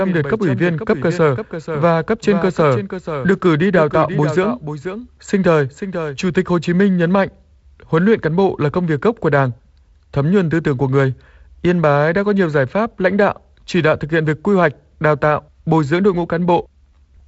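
A doubled audio track runs from the start of this speech clip until 6.18 s, already under way as it begins. A second full-band copy, about 10 dB quieter, trails the original by roughly half a second with no reverberant tail, then cuts off abruptly, likely from a slower capture path recording it twice. The clip carries G.722 wideband coding, with nothing heard above 7.7 kHz and the light lower-band noise that fits 48 kbit/s operation.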